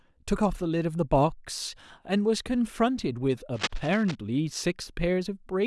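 From 3.54 to 4.15 s, a dense, uneven rustling and scratching sits over the speech, roughly 10 dB below it, then stops. This is cable scratch noise, and it is likely caused by a worn cable, connector or control being moved during recording. The shifting contact makes its resistance jump about rapidly, and those fluctuations add ragged bursts of noise to the signal for as long as the movement lasts.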